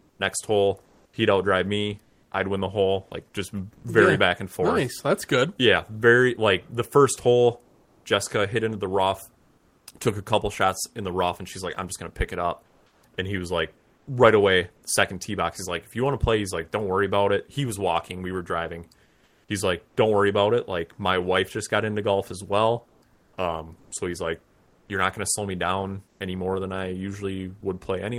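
A speech recording in which the background keeps going flat during pauses. This is comfort noise in place of the background, heard in five stretches: 0.0 to 3.84 s, 6.70 to 9.86 s (after "very like" and before "took a couple shots"), 12.66 to 14.07 s, 19.03 to 19.96 s, and 22.88 to 27.62 s (after "into golf as well"). Within each stretch, between about half a second and a little over a second of the natural room sound turns into a smooth, detail-free hiss. The likely cause is discontinuous transmission of the kind Opus DTX uses. Once the sender judged there was no speech, it stopped sending audio, and the receiver made up noise roughly matched to the background. Near the start, from 0.16 to 0.19 s, the first 30 ms of the speech are missing, so it begins with a hard edge instead of easing in. This is an onset clipped by the voice detector. The detector was likely slow to notice that sound had resumed, so the opening was never sent and synthetic noise played in its place. 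At 6.70 s, just after "very like", about 10 ms of speech drops out and is replaced by that same steady noise. This is sound dropped by the voice detector: the detector likely took a soft word ending for background and stopped sending too early.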